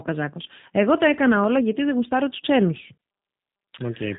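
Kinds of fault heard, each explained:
G.729 codec: speech is rebuilt from a vocal tract model and sparse pulses, so it sounds plainly rough and synthetic, not merely cut off above 4 kHz.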